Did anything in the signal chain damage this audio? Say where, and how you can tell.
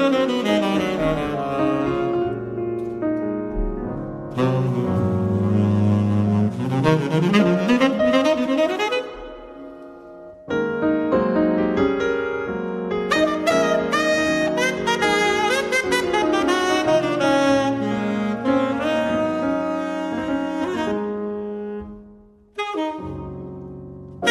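No damage from the chain.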